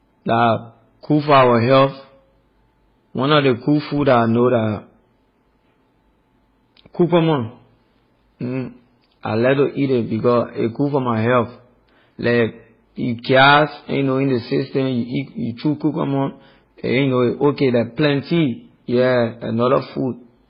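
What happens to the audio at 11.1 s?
At 11.1 s, as throughout, the speech carries transcoding between lossy codecs. Its sound likely comes from a low-bitrate MP3 stage re-encoded as HE-AAC. Smeared, watery artefacts from both stages stack. A spectrogram shows a hard ceiling near 5.2 kHz with patchy, blocky energy below.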